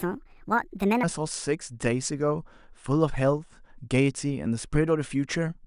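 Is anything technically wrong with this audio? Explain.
Yes, the first second is off. From 0.0 to 1.03 s there's a wrong sample rate: the speech runs about 1.45 times fast and roughly 6.5 semitones high, consistent with 22 kHz audio played back at 32 kHz.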